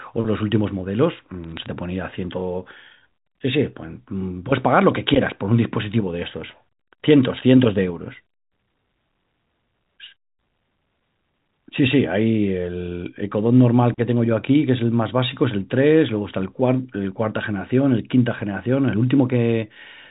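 Bit errors on the digital phone line corrupt single samples from 1.44 to 1.66 s, producing sharp ticks and brief crackle over the speech.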